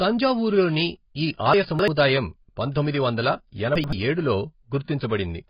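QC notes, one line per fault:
Throughout: AAC compression. Nothing is heard above about 5.1 kHz, and the band below is thin and smeared, with a watery, warbling texture on held vowels and fizzy, blurred sibilants. This heavy damage is likely from AAC-LC coding at a very low rate, around 16 kbps. The encoder lowers its cut-off and quantises the remaining frequency lines so coarsely that gaps and substitute noise replace real detail.
1.54–1.88 s and 3.76–3.93 s: chunks out of order. In each span the speech jumps and jumbles for a moment. The breaks fall on pieces about 85 ms long, so the timing points to a chunked write path. In the first span one piece plays about three chunks late, after the material that should follow it. In the second the piece lands one chunk late. Nothing is missing, but the order is wrong and the joins are discontinuous.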